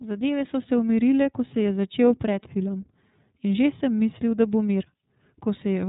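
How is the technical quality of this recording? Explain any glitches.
The recording is degraded by low-bitrate codec coding throughout. The iLBC codec codes each 30 ms frame of this speech on its own, consistent with its 13.33 kbps mode, and discards everything above 3.8 kHz. The result is plainly audible: muffled, narrowband speech with a rough, synthetic edge from start to finish.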